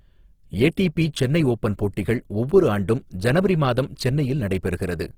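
Across the whole clip the speech sounds rough and grainy, with a noisy, hashy texture riding on the voiced sounds rather than swirling gaps, and the damage is plainly audible from start to finish. The top end is not dulled; content reaches up to about 20.4 kHz. The likely cause is Opus compression in its music (CELT) mode, where energy is kept in every band but starved bands are refilled with folded or noise-like content, which fits a low rate near 16 kbps.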